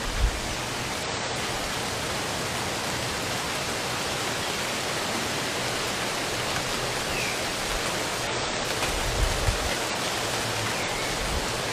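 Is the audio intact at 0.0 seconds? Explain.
Yes, the audio is intact at 0.0 seconds, with no audible fault at that moment.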